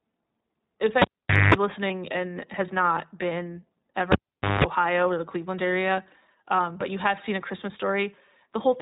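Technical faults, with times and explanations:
throughout, iLBC codec: The speech is confined to a narrowband channel with nothing above 4 kHz, so it sounds dull and telephone-like, and the coding damage is plainly audible as a rough, slightly synthetic edge. Each short frame's excitation is coded on its own, without drawing on the previous frame. The character fits 20 ms frames at around 15.2 kbps, where this frame-by-frame coding leaves small discontinuities that add to the roughness.
1.02–1.54 s and 4.12–4.64 s, cable pulled and plugged in: Each event opens with a pop as the live connector breaks contact. Near silence follows while the signal path is open, lasting about 0.48 s the first time and 0.47 s the second. Then a burst of 50 Hz mains buzz, about 0.22 s and 0.19 s long, is heard while only the plug tip touches and the unshielded conductor picks up hum. A second pop marks the sound returning when the plug seats fully.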